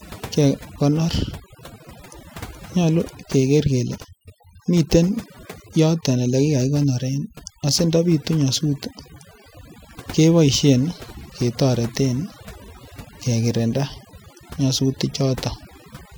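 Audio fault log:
throughout: overdone noise removal. Noise reduction was set too strong. Bands near its noise estimate are cut, taking quiet speech too. Gaps twinkle.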